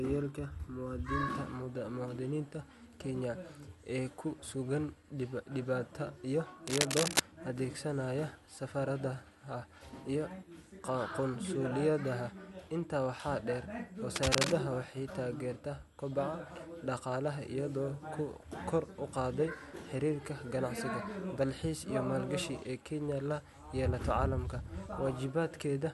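A worn cable or connector was likely moved, its contact resistance fluctuating: cable scratch noise, harsh uneven rustling louder than the speech, at 6.66–7.21 s after "ee ku sugan dibedda" and 14.16–14.53 s after "waxaa dheer".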